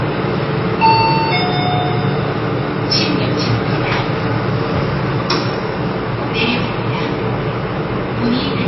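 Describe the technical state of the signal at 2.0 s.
At 2.0 s, as throughout the clip, the sound carries plainly audible damage, likely from MP3 compression at a starved bitrate near 24 kbps. Everything above 5.8 kHz is cut off, and weak frequency bands flicker on and off between frames, giving a watery, swirling texture with smeared attacks. A spectrogram would show a flat ceiling at 5.8 kHz and patchy holes below it.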